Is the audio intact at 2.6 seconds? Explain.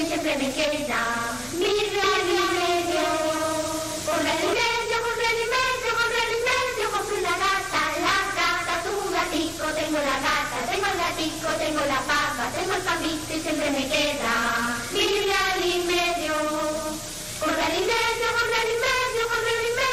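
No, a doubled audio track runs from 2.04 to 4.54 s: a dry copy about 5 dB quieter trails roughly 400 ms behind, likely from a second, slower capture path. Unlike an echo, it has no decay and starts and stops abruptly.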